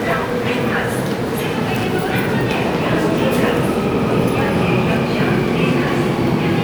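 Nothing in these everyday sounds trips up the ear at any point, and no technical faults turn up anywhere in the clip.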